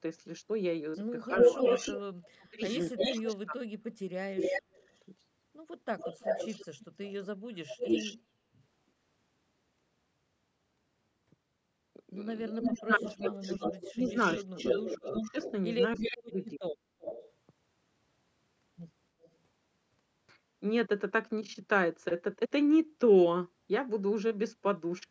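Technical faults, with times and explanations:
1.28–4.82 s and 12.49–16.76 s, speech suppressed in double talk: the voice dips in pieces by up to about 35 dB, then about 25 dB, for roughly 1.5 and 2 seconds in total, likely because the echo canceller turned down both its own talker and the loudspeaker echo while both sides talked. Sound is removed, not added.
1.38–3.32 s, 4.35–4.97 s, 5.98–8.17 s, 12.64–17.32 s and 19.23–19.30 s, echo leak: a delayed copy of the voice returns 315 to 355 ms late, first about as loud as the speech and later fading to about 35 dB below. The likely cause is loudspeaker pickup that the echo canceller did not remove. Unlike suppression, this adds sound.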